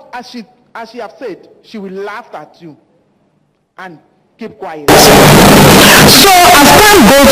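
At 4.88 s the sound abruptly turns into very loud, harsh distortion that lasts to the end. Quiet moments become as loud as everything else. This is likely signed and unsigned mixed up, with 16-bit samples read with the top bit flipped, so every zero crossing jumps across the full range.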